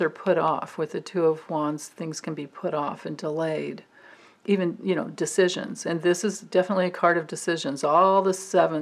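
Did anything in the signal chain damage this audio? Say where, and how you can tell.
No, nothing audible in this audio points to damage at any stage of the chain.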